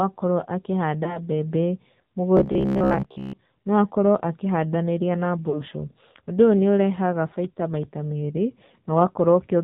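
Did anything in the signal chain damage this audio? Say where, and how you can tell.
Yes. The codec stage left its mark on the whole clip: nothing reaches above 4 kHz, and the speech has the buzzy, synthetic texture of the AMR narrowband mobile codec at a low rate, plausibly near 7.4 kbps. Its vocal-tract model and sparse pulse excitation can't carry finer detail.

Over the network, lost AMR speech frames show up twice. At 1.04 s a brief dip and warble runs to 1.20 s, consistent with about 20 ms of missing audio. At 5.50 s a longer gap, consistent with about 40 ms lost, is drawn out and fades until 5.63 s. Each time the decoder reused its last good parameters with falling gain.

From 2.37 s to 3.39 s the speech turns into a rigid, metallic buzz near 66.7 Hz while still loosely tracking the speech, which is robotic sound from repeated short buffers. The likely cause is a driver or buffer stage replaying roughly 15 ms chunks while fresh audio is skipped, which replaces most of that stretch.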